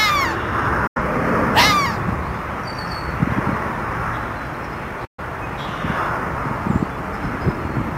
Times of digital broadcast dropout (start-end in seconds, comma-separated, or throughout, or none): 0.87-1.00, 5.05-5.24